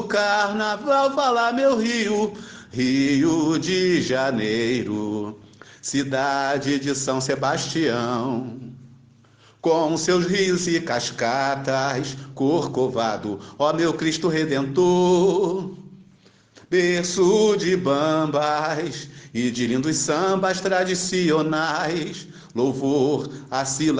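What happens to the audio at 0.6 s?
Nothing goes wrong at 0.6 s; the audio plays through that moment intact, with no dropout, click or other fault to be heard.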